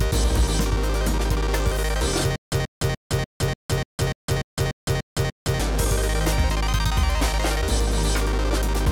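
From 2.36 to 5.6 s, stutter with silent gaps, likely a playback stall: a 135 ms burst repeats every 294 ms, showing as identical blocks between flat silent lines.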